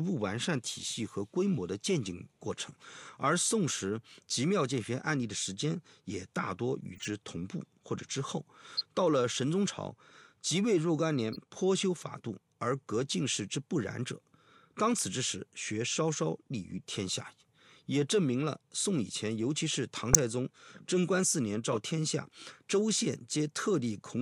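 Corrupt frame decoded at 6.95–7.08, 8.77–8.85, 11.33–11.38, 20.13 and 21.72–21.77 s. Compressed frames with flipped bits were decoded and played anyway, putting energy at the wrong frequencies for a few frames each. They come through as short chirps and noise bursts, loudest at 20.13 s.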